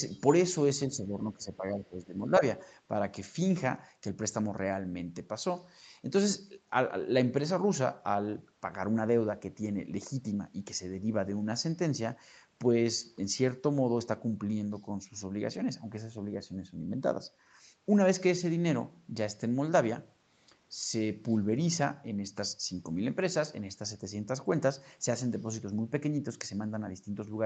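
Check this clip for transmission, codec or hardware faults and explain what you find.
There is one fault, appearing twice early in the clip: speech suppressed in double talk. The speech level dips by about 5 dB from 0.87 to 1.13 s, then by about 10 dB from 1.33 to 2.43 s. The likely cause is an echo canceller that heard both sides at once, mistook the talker for loudspeaker echo, and turned the microphone down. Unlike packet loss, this is not lost audio being patched over; the canceller is turning the speech down. The audio's 8 kHz bandwidth comes from the normal call processing and codec.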